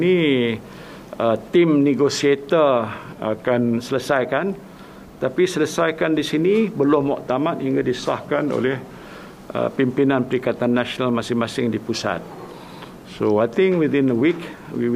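The audio slows by 6.45% and drops 115 cents at 3.12–3.78 s, 8.22–9.02 s and 12.32–13.40 s, then snaps back, likely a drift correction step in clock-matching software.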